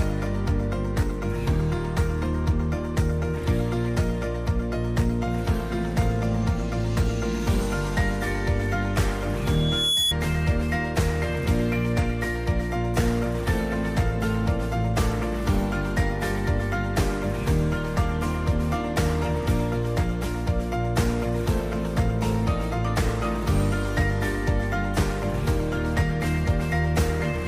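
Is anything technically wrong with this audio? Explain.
Yes. From 9.45 s to 10.14 s there is loudspeaker feedback squeal: a microphone is picking up the speaker it drives, and at 3.4 kHz the loop gain passes one, so that tone feeds on itself. It swells over about half a second into a piercing whistle that reaches roughly the level of the sound itself. A spectrogram shows a single bright horizontal line at 3.4 kHz, and the waveform's envelope balloons during that stretch.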